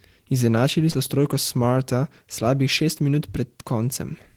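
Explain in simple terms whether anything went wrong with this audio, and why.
Something did go wrong, briefly, between about 0.91 and 0.98 seconds, just before "s trojko". That is short concealed packet loss. About 40 milliseconds of the call arrived too late to be played. The receiving end covered roughly 31 milliseconds of that hole by stretching the sound that came just before it, then eased back into the real audio. The result is a quick smear or wobble, not silence. A plain dropout would leave a hard gap instead.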